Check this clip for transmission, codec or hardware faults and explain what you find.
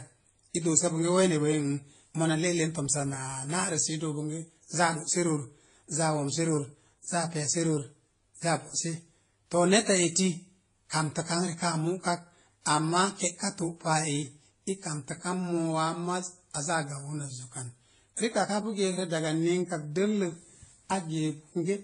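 One fault runs through the whole clip. The speech has nothing above 10 kHz and carries layered, mismatched compression artefacts. This is likely transcoding between lossy codecs. Each pass re-encodes the earlier damage and adds its own. The lowest cut-off survives.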